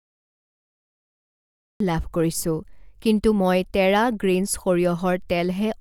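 For the first 1.80 s there's nothing at all, just flat digital silence, and then the speech drops in abruptly at 1.80 s, already partway through a sound. That's a classic cut-off start: capture or the stream kicked in late, so whatever came before that point was never recorded. You can hear it in the missing onset. There's no natural attack or fade-in, the audio simply switches on mid-utterance.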